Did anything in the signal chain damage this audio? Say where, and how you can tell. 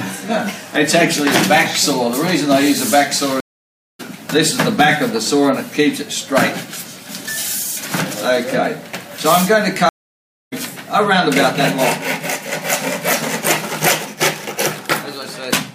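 Yes. The damage happened at the network stage: two stream reconnects. Audio drops out at 3.40 s for about 0.59 s and at 9.89 s for about 0.63 s. Each time it resumes further along, skipping roughly 0.4 s and then 0.7 s. The link broke, the player rejoined the live stream, and a fresh decoder picked up later.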